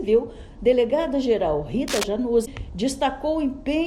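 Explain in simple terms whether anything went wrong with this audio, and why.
Two separate problems can be heard.

From 1.88 to 2.04 s, a burst of rough scratching and rustling sits over the sound, fairly loud and close to the level of the sound itself. This is cable scratch noise. It is likely caused by a worn cable, plug or control being moved, so the electrical contact inside kept changing for a moment and added ragged noise to the signal.

Shortly after, from 2.42 to 2.47 s, there is a brief glitch, about a twentieth of a second long. This comes from damaged data in a compressed stream. A small piece of the compressed file was corrupted, so the player misread that part and produced a short, unnatural glitch before picking up the sound again.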